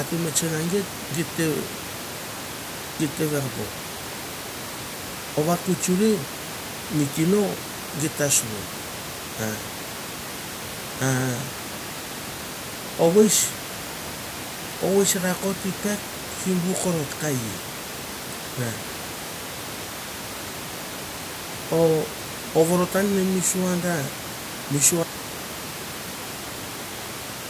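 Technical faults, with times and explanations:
25.04 to 27.49 s, audio dropout to silence: the speech stops abruptly and the room noise, about 14 dB below the speech until then, vanishes with it, leaving silence through the end of the clip. That points to the input being lost, likely through a disconnected device or mute, while recording continued writing silence. The waveform shows a flat line, and the spectrogram turns dark, with no room noise left.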